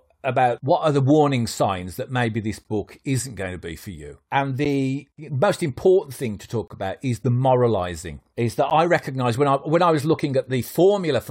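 Speech clip with a gap between stream segments: hard-edged silent holes at 2.64 s after "signs that maybe this", 4.65 s, 6.68–6.70 s before "about is the moralizing", and 8.70 s, each 10–26 ms, where mismatched segment timestamps leave silence and no audio is lost.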